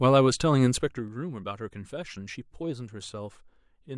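From 0.77 to 1.11 s a ticking rides on the speech as its level drops by about 10 dB. This is zipper noise: the gain falls in steps of about 3 dB, around ten a second, each unsmoothed step leaving a small click.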